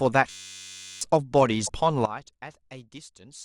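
From 0.30 to 1.01 s the system froze in a hang loop while the sound hardware kept replaying the same 10.67 ms of its ring buffer, which fits a 512-sample buffer. That slice repeats 67 times as a steady buzz at 93.8 Hz, and about seven-tenths of a second of speech is lost.

Between 1.63 and 1.69 s there is damaged data in the compressed stream. The decoder misreads the corrupted frames and has to find its footing again, which produces a brief chirp or blip cutting across the speech.

At 2.05 s a sudden gain jump occurs, likely from a digital gain change applied without a ramp. The speech and its background noise drop together by about 16 dB in a single step, and they stay at that lower level until the clip ends.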